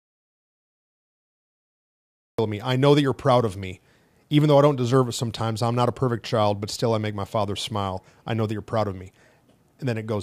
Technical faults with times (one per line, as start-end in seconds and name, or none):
0.00-2.38 audio dropout to silence